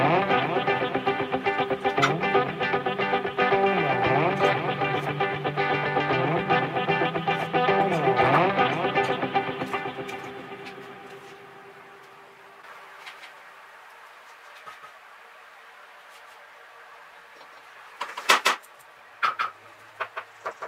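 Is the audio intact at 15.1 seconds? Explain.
No. From 12.99 s to the end, a doubled audio track is present, likely from the sound being captured again through a slower path. A full-band copy trails around 150 ms behind, about 5 dB quieter, starting abruptly and adding a dry, echo-like smear.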